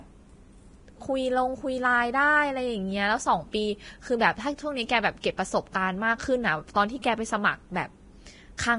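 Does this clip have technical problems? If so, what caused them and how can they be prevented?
Yes. Throughout, the speech sounds hissy and grainy with nothing above 10.6 kHz, likely heavy Vorbis compression turning fine treble detail into noise, consistent with about 31 kbps. Prevent it by encoding at a higher Vorbis quality or bitrate.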